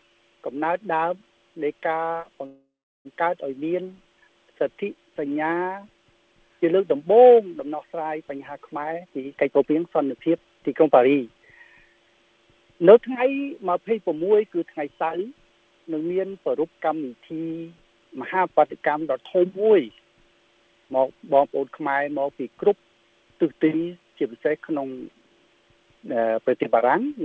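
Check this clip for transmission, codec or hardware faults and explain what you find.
Two faults stand out, both from the call path, whose G.722 coding leaves nothing above 8 kHz.

From 2.46 to 3.07 s there is a call audio freeze, likely packets delayed until the jitter buffer emptied. A fading buzz or hiss gives way to about 0.38 s of flat silence, then the audio resumes intact.

From 8.78 to 11.05 s a jitter buffer speed-up trims repeated pitch-period slices, about half a second in total. The audio runs at 126% speed at unchanged pitch, and the waveform looks compressed in time.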